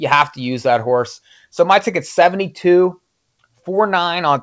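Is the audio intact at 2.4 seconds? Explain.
Yes, the audio is intact at 2.4 seconds, with the speech passing cleanly through the G.722 call path, which carries nothing above 8 kHz.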